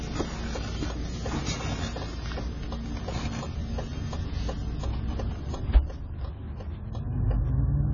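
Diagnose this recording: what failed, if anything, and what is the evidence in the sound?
The codec stage is the problem: the whole clip has the dull, smeared character of heavy AAC compression, with nothing above 7 kHz and a warbly, fizzy texture on sustained sound. That's likely a starved AAC-LC encoder, which fits a bitrate around 16 kbps.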